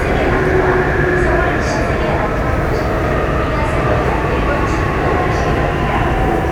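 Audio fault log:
No faults are audible anywhere in the audio.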